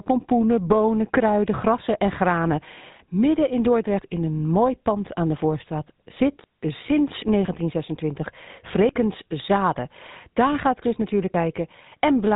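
From start to finish the speech carries GSM full-rate codec damage, and it's plainly audible. Everything above about 3.8 kHz is gone, and the excitation rebuilt from sparse regular pulses gives the voice that buzzy, gravelly edge. That fits the old 13 kbps GSM full-rate coder.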